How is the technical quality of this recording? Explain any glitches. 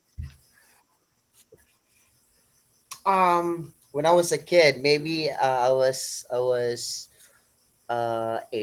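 The quality is held back by one fault running through the whole speech clip: Opus voice compression. The coder splits the band, with linear prediction below 8 kHz and a transform layer above. The coarse excitation coding fits a low bitrate around 16 kbps, so the speech sounds plainly hoarse and slightly robotic, despite reaching full bandwidth.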